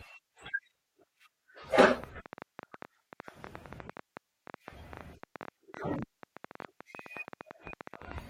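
A train of clicks runs through this speech recording from 2.04 s to 8.19 s: around 70 similar pulses at an uneven pace of about 10.9 per second, peaking roughly 10 dB above the speech and ticking through pauses too, most likely interference or a faulty connection or power supply.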